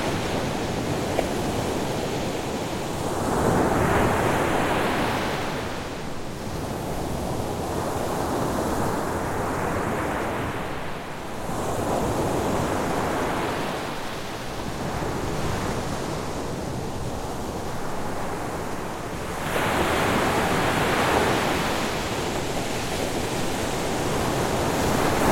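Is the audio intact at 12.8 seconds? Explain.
Yes, the audio is intact at 12.8 seconds, with no audible fault at that moment.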